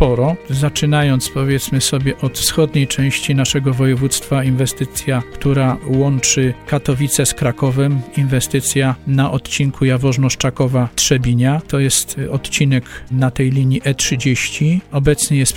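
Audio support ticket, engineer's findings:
No faults found on this capture; signal path shows nothing requiring action.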